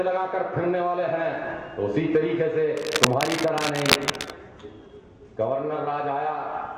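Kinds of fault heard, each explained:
Cable scratch noise: a worn connector or cable likely shifted, its contact resistance jumping about, laying dense rough scratching as loud as the sound from 2.77 to 4.32 s.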